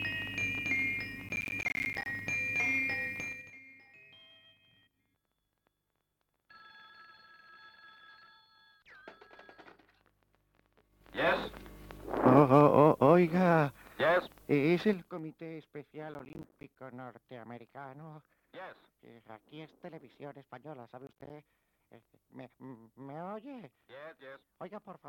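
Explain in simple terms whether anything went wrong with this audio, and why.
Processor overload crackle happens three times: from 1.29 to 2.06 s, from 16.12 to 16.76 s, and from 21.07 to 21.30 s. The computer was too busy to deliver each small chunk of audio on time. Each late chunk left a short hole of silence with hard edges. The holes come quickly one after another, which fits chunks of about 10 ms. Together they sound like a gritty, tearing crackle over the sound. The first burst is the longest.

Zipper noise appears twice, from 3.24 to 3.58 s and from 14.85 to 15.19 s. Each time the volume was turned down in coarse jumps instead of a smooth slide. The jumps come about ten times a second. Each jump makes a tiny click, so the drop in volume sounds like a quick ticking or zipping.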